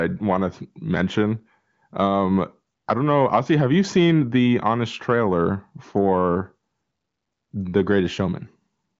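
No technical faults are audible.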